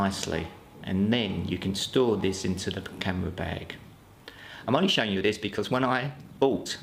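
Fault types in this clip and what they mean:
Time-stretched section: From 4.61 s to the end, the sound suddenly runs about 1.35 times faster while its pitch stays put. The pace jumps at that point rather than easing in. The sped-up stretch sounds rushed. This likely comes from software squeezing the audio to fit a shorter length. It keeps the pitch by cutting out short slices and joining what remains.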